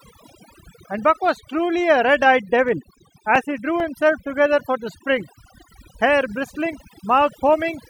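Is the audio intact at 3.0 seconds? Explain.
No. Around 3.0 s the audio sits inside a run of CD scratch ticks from 2.46 to 4.25 s: nine brief clicks or micro-dropouts, each lasting a few milliseconds at most. They arise where a disc blemish destroys more data than error correction can rebuild, forcing the player to interpolate or mute the damaged samples once per revolution. Beneath this, overdone noise removal affects the whole clip. Frequency bands near the estimated noise floor are pushed down or switched off, leaving a lowered background that breaks up into twinkling specks.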